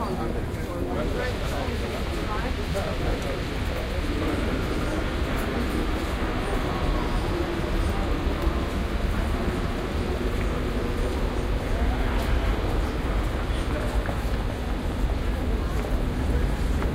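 No technical faults can be heard anywhere in this recording.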